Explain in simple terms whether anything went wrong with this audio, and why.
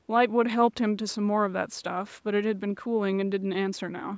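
Nothing went wrong with this speech recording. It has passed through a call's microphone processing, which trims away the very deepest bass and leaves no sound above about 8 kHz, as a normal phone or video call does.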